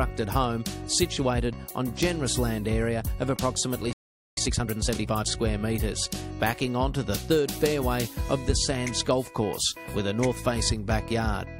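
At 3.93 s the sound cuts to silence for about 440 ms, a playback stall, likely the player running short of data or its thread being blocked. From 4.37 s to 5.25 s the audio runs hurried at 1.5 times speed with unchanged pitch, a time-compressed catch-up trimming the backlog through small cross-faded cuts.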